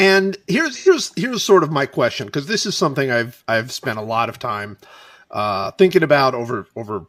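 At 0.77 s the stream suffers AAC frame loss with concealment: data goes missing for about 85 ms, which points to two lost frames, and the decoder papers over the gap by reusing the last good spectrum, rebuilt with randomized phase and guessed energy. Until 0.88 s the speech turns into a brief smeared, noisy and phasey patch, then clean decoding resumes just before "here's sort of my".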